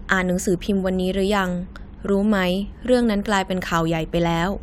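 No technical faults can be heard in this recording.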